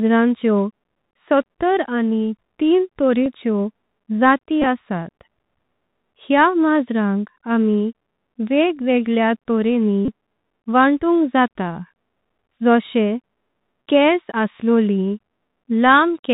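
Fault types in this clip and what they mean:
Bluetooth CVSD headset codec: The speech passed through the narrowband headset link, where each sample is coded as a single up-or-down bit with an adapting step, consistent with a 64 kbps CVSD stream. Here the damage is plainly audible through the whole clip. Nothing above 4 kHz survives, loud bright moments overrun the step and smear into distortion, s sounds come out scratchy, and a grainy hiss sits under the speech.
Bluetooth headset packet repeated: Voice packets between headset and phone went missing, and the chip decoded the previous packet's bits again in their place. Because each repeat recurs every 3.75 ms, runs produce a short buzz near 267 Hz. It is heard at 3.24 s, just after "सत्तर आणि तीन", then scattered across 4.62 to 4.67 s, at 10.05 to 10.11 s, and briefly at 12.59 s.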